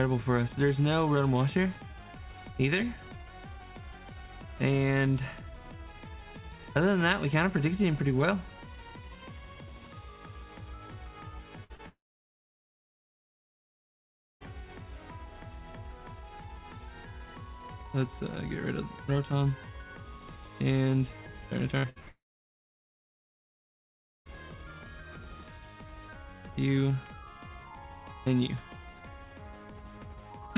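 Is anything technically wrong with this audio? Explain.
Yes. There are two clusters of network loss, each ending in a multi-second dropout.

Burst of packet loss occurs at 11.64 to 11.72 s, then at 21.78 to 21.86 s, 21.90 to 21.98 s and 22.00 to 22.08 s. Each time, about 60 ms of audio failed to arrive. The receiver stretched the preceding sound to cover it, fading it out, so you hear a held buzz or decaying hiss before the sound jumps ahead.

Short concealed packet loss occurs at 11.76 to 11.81 s, about 40 ms missing. The decoder filled the gap by extending the last sound's pitch or noise character and then crossfading back into real audio. It comes through as a brief smear or wobble, just after the first burst.

Long network dropout occurs at 11.89 to 14.42 s and 22.08 to 24.27 s, most likely a stall in the network path. Concealment carries the last sound for a moment, then gives way to silence for roughly 2.5 s and 2.1 s respectively. 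The sound then resumes with that stretch lost.

Throughout, the call path shows no content above 4 kHz, which fits narrowband G.711 A-law at 64 kbps.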